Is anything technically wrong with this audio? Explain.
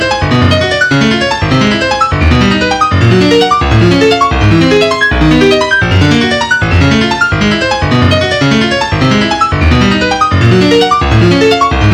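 Yes. Hard clipping runs through the whole clip. The signal is driven about 7 dB past what one stage can pass, so the peaks are cut flat. Only a few percent of samples hit that ceiling, so the damage lands on the loudest moments as a brittle crackle. The flat-topped peaks add harmonics high up the spectrum. That harsh, edged sound sets it apart from soft saturation, which rounds peaks off more warmly.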